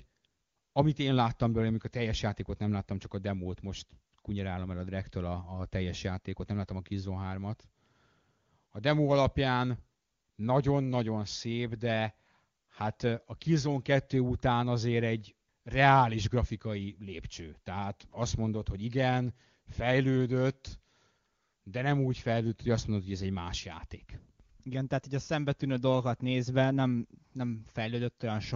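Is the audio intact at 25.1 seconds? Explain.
Yes, the speech at 25.1 seconds is intact, carried cleanly by the AMR wideband (HD Voice) codec at 23.85 kbit/s.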